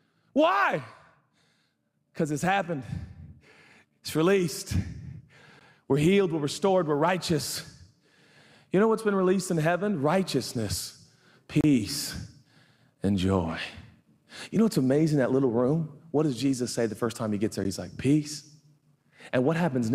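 At 5.59 s, from 11.61 to 11.64 s, and at 17.64 s the speech stops dead in a hard-edged hole of about 15 ms, 30 ms and 12 ms. These are gaps between stream segments, spaced six seconds apart. Each segment's timestamps sit slightly apart, and the player pads the space with silence. Unlike a dropout or packet loss, nothing is missing: speech resumes exactly where it halted, just pushed later.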